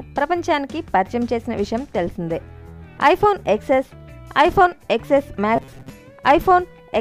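From 5.56 to 5.90 s, the sound turns into robotic sound from repeated short buffers. It becomes a rigid, metallic buzz at 134 Hz. About half the audio there is repeated. The likely cause is late-arriving data, with roughly 7.5 ms fragments looped in place.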